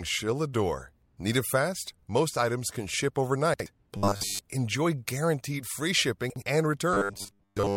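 Just after "items can ship", 3.54 to 3.66 s has chunks out of order: a 60 ms chunk lands one slot late, giving a jumbled blip. It happens again from 6.3 to 6.42 s, right after "enjoy guaranteed free". Between these, 3.97 to 4.41 s, just before "enjoy guaranteed free", turns into a metallic 100 Hz buzz, robotic sound from repeated short buffers, with essentially all of it repeated. The same buzz runs from 6.94 s to the end, with most of that stretch repeated. Both are likely caused by a roughly 10 ms buffer being looped while the real audio gets skipped.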